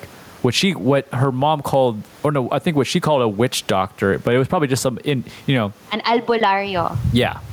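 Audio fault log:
throughout gain pumping: the room noise sits about 41 dB below speech, with a gain swing of around 15 dB, likely from excess gain with a fast limiter. The waveform envelope looks flattened.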